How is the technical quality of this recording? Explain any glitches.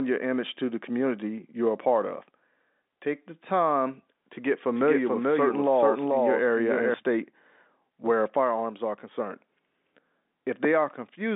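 The recording has one glitch, a doubled audio track, heard over a telephone-band line that carries nothing above about 3.8 kHz. From 4.76 to 6.94 s, a second copy of the speech runs about 0.4 s behind the first, at roughly equal level. It has no decay or room colour and cuts in and out abruptly. The likely cause is a slower capture path or an edit that left two copies out of step.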